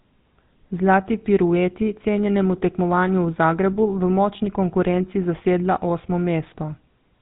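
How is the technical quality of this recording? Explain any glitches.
Pretty rough, honestly. Throughout the speech there's GSM full-rate codec damage: pulse-driven vocal-tract modelling makes a buzzy, gravelly texture that fits 13 kbps, and nothing comes through above 3.8 kHz.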